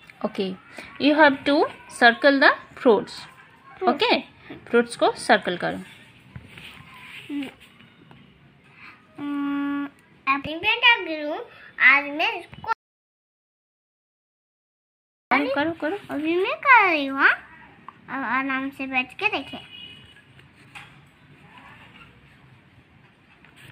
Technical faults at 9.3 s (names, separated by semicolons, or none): none